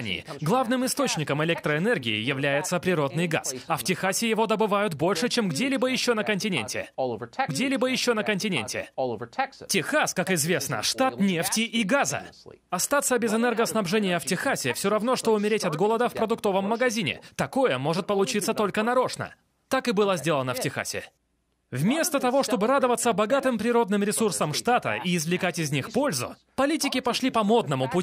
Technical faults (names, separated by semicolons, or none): stream segment repeated